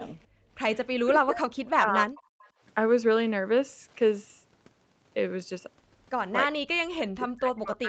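A speech recording from a call whose top end stops near 8 kHz, as a wideband Opus path would leave it. The echo canceller clamped the microphone while the loudspeaker played, gating the background by about 20 dB from 0.28 to 0.49 s, so the room tone drops out for around a fifth of a second and then returns. Simultaneous talk from the far side likely confused the canceller, producing speech suppressed in double talk from 0.99 to 2.2 s and again from 6.45 s to the end. The talker's level sinks deeply, at worst roughly 40 dB, so the speech fades and breaks up over about a second in the first stretch. The canceller likely failed to remove all of the loudspeaker pickup, causing echo leak at 2.17 to 2.23 s and 2.41 to 2.49 s. Faint scraps of speech return 314 ms late, roughly 30 dB under the direct voice.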